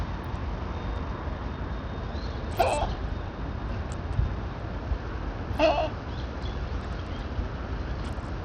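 From start to finish the top end keeps flickering and dropping out, with a gritty, aliased hash riding on everything. That's likely Bluetooth SBC compression starved of bits, and the damage is plain enough to suggest something near 80 kbps.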